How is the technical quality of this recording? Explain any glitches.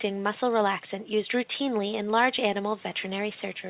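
No glitches or faults heard.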